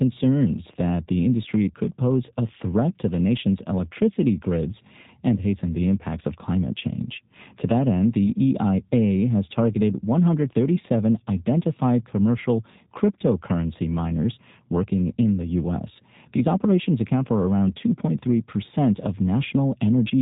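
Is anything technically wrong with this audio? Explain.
Yes. Throughout, the speech carries G.729 codec coloration: it is rebuilt from a vocal tract filter, a pitch predictor and sparse pulses, which fits an 8 kbit/s G.729A stream. Nothing above 3.8 kHz survives, and the result sounds plainly rough and slightly synthetic.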